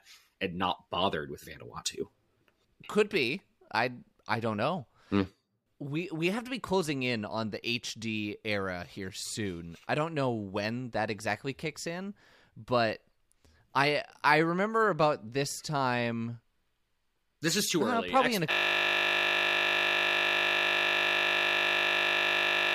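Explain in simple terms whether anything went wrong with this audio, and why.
Something went wrong at 18.51 s. From there to the end, the speech stops and turns into a steady buzz. This is a system hang loop. The computer froze, but the sound hardware kept replaying the last tiny slice of audio it held. That slice is only 20 ms long. It repeats over two hundred times, 50 times a second. Repeating that fast blends into a flat 50 Hz buzz instead of a stutter.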